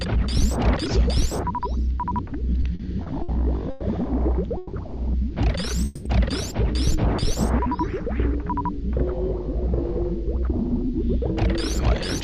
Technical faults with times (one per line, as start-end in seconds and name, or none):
2.61-3.30 repeated stalls (stutter)
3.70-3.83 call audio freeze
4.57-4.75 call audio freeze
5.85-6.07 call audio freeze